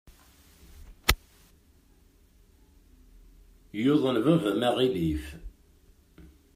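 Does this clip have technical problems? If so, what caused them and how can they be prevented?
No, there are no technical problems in this clip.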